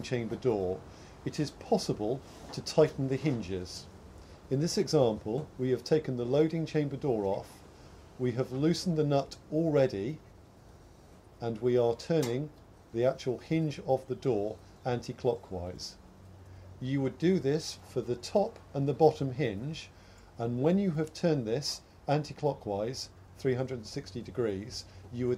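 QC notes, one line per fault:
Throughout, sample clock jitter: the converter clock wanders by roughly 2 microseconds, so each sample lands slightly off time and the error tracks waveform slope. The result is a fine hiss or roughness about 40 dB under the signal. It swells on loud, bright passages and disappears in silence. A spectrogram shows broadband noise appearing only where energy is present, strongest where the high-frequency content is.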